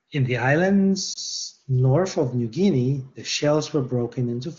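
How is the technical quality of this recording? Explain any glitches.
There's one short glitch, heard over a clear wideband phone channel that fits AMR-WB at its top rate. From 1.13 to 1.17 s, a lost AMR speech frame (a single 20 ms frame, by the sound of it) failed its check. The decoder patched the gap by repeating its last good pitch and vocal tract settings at lower gain, so you hear a quick dip or warble before the speech picks back up.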